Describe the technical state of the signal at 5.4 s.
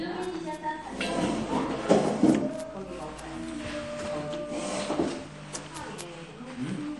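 At 5.4 s the sound has no content above 11.4 kHz. Weak detail flickers with a watery, swirling quality, and transients smear. This is likely MP3 compression at a low bitrate, near 48 kbps. Starved of bits, the encoder drops the treble and switches faint frequency lines on and off between frames.

Word clock ticks also run through this moment. They start at 0.12 s and continue to the end. Sharp ticks of uneven strength recur about every 20 ms. The receiving clock is not locked to the sender and differs by roughly 0.1 percent, so a single sample slips at each crossing.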